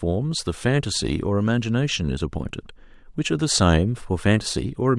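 Listening through the speech recording, nothing stood out as a technical problem at any point.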